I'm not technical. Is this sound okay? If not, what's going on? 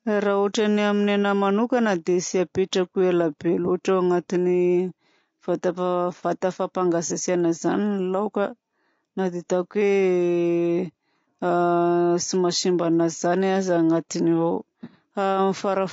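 No. Throughout the speech there is a rough, grainy quality with a dull, slightly artificial top end. That points to low-delay AAC compression, likely from a video-call link squeezing the sound too hard. Unlike a dropout, it never comes and goes; the whole recording sounds this way.

At about 7.07 to 7.12 s there is a brief smeared, noisy blip lasting around 30 ms. This is AAC frame loss with concealment: a tiny piece of the sound went missing and the decoder patched the gap by guessing from what came just before. It is short enough to smear rather than fall silent.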